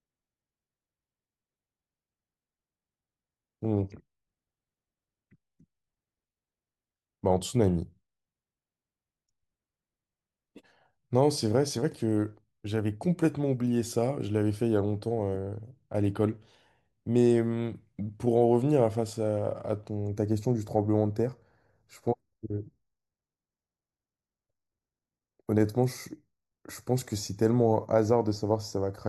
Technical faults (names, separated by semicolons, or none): channel delay (comb filtering)